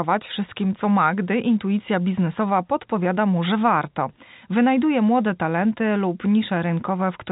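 Careful listening turned up nothing that stood out as a fault in the speech, which carries the narrow band of G.711 telephone coding with nothing above 3.8 kHz.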